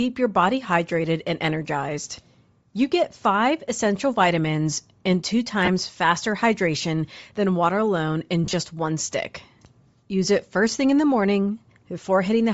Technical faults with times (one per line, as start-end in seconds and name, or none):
0.00-12.53 Bluetooth LC3 compression
5.65-5.69 lost LE Audio frames
8.44-8.54 lost LE Audio frames